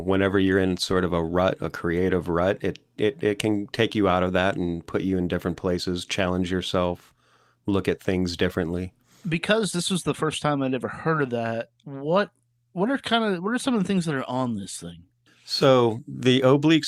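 No technical faults are audible anywhere in the speech recording.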